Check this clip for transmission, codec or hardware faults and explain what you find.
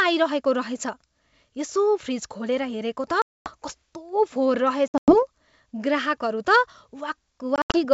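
One transmission fault appears: packet loss on an ADPCM call, three times. At 3.22–3.51 s about 240 ms drops out, roughly ten packets. At 4.88–5.16 s and 7.56–7.79 s, shorter gaps scatter, with runs up to 100 ms and 80 ms. Each gap is hard-edged silence. Afterwards the decoder's predictor and step size no longer match the sender's. So speech returns with brief, slight distortion. The clear wideband G.722 sound fits full-rate 64 kbit/s coding.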